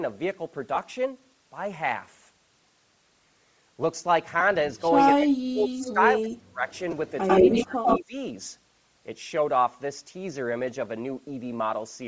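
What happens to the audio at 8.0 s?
Around 8.0 s two call-path faults overlap, both on top of a codec fault that runs through the whole speech clip.

An echo leak runs from 6.69 to 7.99 s, ending right at this point. A copy of the speech returns 98 ms late, somewhat louder than the original. This is likely a loudspeaker on one side whose echo canceller failed to remove what its microphone picked up. The echo leak adds sound: a delayed, doubled layer, not a loss. The 98 ms lag is long enough to hear as a separate copy rather than as thickening of the original.

Speech suppressed in double talk spans 7.45 to 8.15 s, so it is still active at 8.0 s. Here the opposite happens: the talker's own speech is pulled down, at its deepest by about 25 dB, in pieces totalling around a third of a second. This is likely an echo canceller that could not separate the talker from the returning echo while both sides spoke, so it attenuated both. 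Gaps and dips mark this fault, not an extra copy.

Throughout, Bluetooth LC3 compression is plainly audible. It is likely low-bitrate LC3 with short 7.5 ms frames, consistent with about 32 kbps. Upper frequencies are thinned and partly replaced with noise, which gives a breathy, grainy edge. That grain separates it from the clean cut-off above 8 kHz left by the normal call microphone processing.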